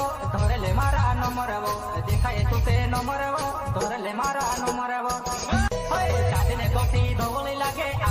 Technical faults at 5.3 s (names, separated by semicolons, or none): none